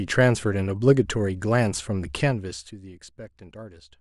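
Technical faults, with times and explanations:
No technical faults detected in this speech recording.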